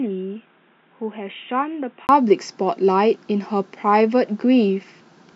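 Input switched to a poorer device, 0.00 to 2.09 s: the speech is band-limited, with nothing above 3.8 kHz, noticeably quieter and carrying faint added background noise, likely from a lower-grade microphone or headset call profile. A brief gap at 2.09 s marks the return to full, clearer sound.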